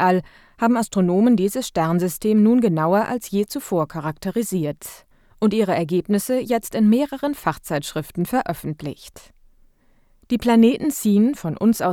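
Nothing in this recording of speech stands out as a technical fault, so there's nothing to flag here.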